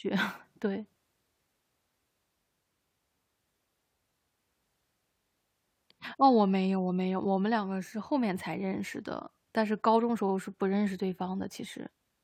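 At 10.28 s a short stutter appears: a block of about 46 ms, which fits two compressed frames, is played a second time, so that slice of speech repeats and the clip grows by 46.4 ms. These are repeated frames, where the same compressed data was written or sent twice and decoded twice. On a waveform the same 46 ms shape appears twice in a row, ending at 10.32 s; a spectrogram shows an identical patch duplicated.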